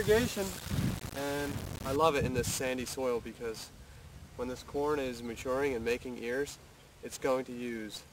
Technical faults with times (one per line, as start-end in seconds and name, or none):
0.00-1.96 low bit depth without dither